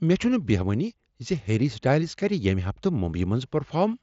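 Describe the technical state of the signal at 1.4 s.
At 1.4 s the speech is intact, with nothing wrong at that point beyond the ordinary band limit of the mSBC Bluetooth headset path, which carries nothing above about 7.7 kHz.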